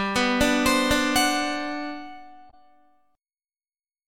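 At 2.50 s, lasting about 40 ms to 2.54 s, damaged data in the compressed stream makes the decoder misread frames and hunt for the next valid header, producing a brief glitch.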